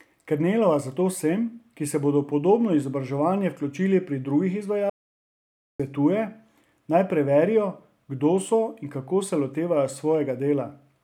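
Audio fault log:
4.90–5.80 s: audio dropout to silence. Right after "pri drugih" the speech cuts off mid-flow and about 0.9 s of silence follows, with no room tone at all, which sets it apart from a quiet pause. Likely a lost input or stray mute while recording continued.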